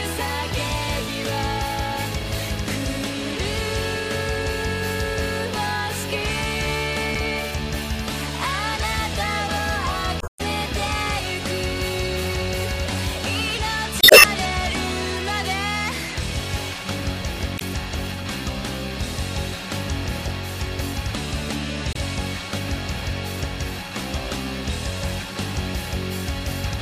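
Damaged data in a compressed stream breaks up the sound five times: at 7.12 to 7.17 s, 10.18 to 10.41 s, 14.00 to 14.25 s, 17.55 to 17.62 s and 21.92 to 21.97 s. Corrupted bytes leave the decoder unable to read the affected frames, so it outputs garbage until it locks onto a valid header again. The results are short chirps, squawks, clicks or holes, lasting about 45 to 70 ms at the brief hits and about a quarter second at 10.2 and 14.0 s.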